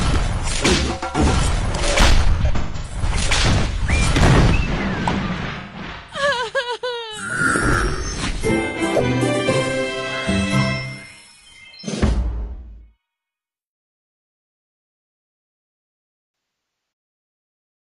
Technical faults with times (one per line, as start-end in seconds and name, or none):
2.35-3.02 AAC frame loss with concealment
5.51-6.22 AAC frame loss with concealment
8.67-8.79 AAC frame loss with concealment
12.43-12.79 AAC frame loss with concealment
16.32-16.92 AAC frame loss with concealment